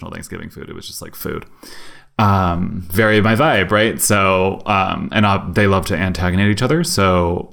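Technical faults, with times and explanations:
1.21 s to end: sudden gain jump after "was just like", level and background noise rising about 8 dB at once, a step in the waveform envelope, likely an unramped gain change.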